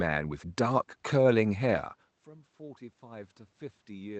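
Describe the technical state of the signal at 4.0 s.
Automatic gain rising is under way at 4.0 s, part of a swell running from 2.29 s to the end. Around 2 s the talker moved back, and the level at the microphone fell by about 21 dB. The gain control judged the input too quiet and is slowly pushing its gain up, so at 4.0 s the voice is still climbing back in loudness, with the room noise swelling up alongside it.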